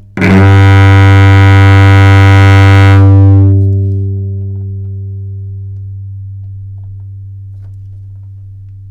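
Sounds, hard clipped from 0.22 to 3.53 s: driven about 12 dB past a stage's limit, peaks are flattened into harsh fuzz, unlike soft saturation's rounded, gentler distortion.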